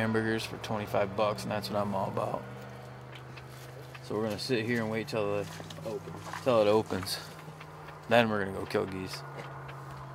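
No technical faults are audible anywhere in this audio.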